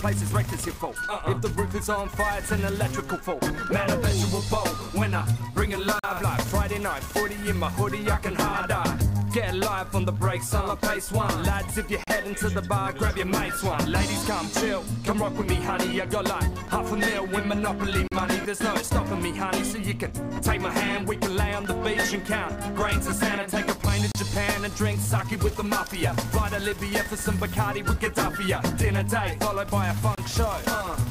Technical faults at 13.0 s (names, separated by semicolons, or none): none